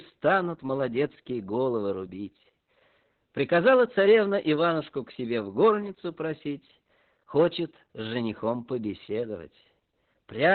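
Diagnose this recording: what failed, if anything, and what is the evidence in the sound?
The codec stage failed. Opus voice compression runs through the whole speech clip. Nothing sounds above about 4.3 kHz, so the sound is narrowband and muffled. Speech comes out hoarse and slightly robotic. This points to the SILK coder at a very low bitrate, near 8 kbps, with coarse excitation coding.

Hard clipping also occurs at an overloaded gain or conversion stage. Peaks are driven past full scale and cut flat. This gives a harsh crackle from 0.26 to 0.38 s, just before "молодецкие головы рубить", at about 5 dB over. It returns from 3.40 to 4.69 s, before "к себе в", and from 10.43 s to the end, both at about 7 dB over.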